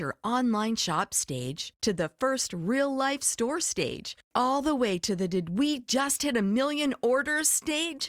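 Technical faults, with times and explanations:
No technical faults, with times and explanations, are present in this clip.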